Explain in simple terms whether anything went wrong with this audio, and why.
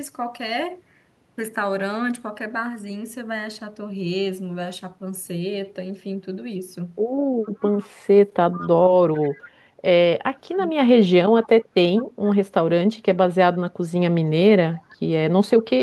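Faint repeats of the speech come back about 0.43 seconds late at 7.43–7.88, 8.52–8.69, 9.14–9.3, 11.97–12.04 and 14.76–14.95 s: echo leak, likely from a loudspeaker. Unlike reverberation, it is a distinct delayed copy.

At 10.5–10.78 s the speech dips sharply in pieces while both sides talk: speech suppressed in double talk, likely the echo canceller muting both. Unlike a dropout, nothing is skipped.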